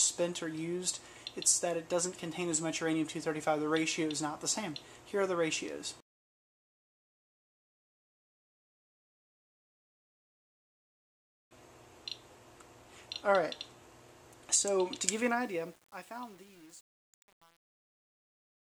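From 15.13 s to 18.70 s, truncation distortion on a fade turns the falling level into coarse steps, fitting 8-bit resolution without dither. The grit grows as the level drops, unlike steady hiss.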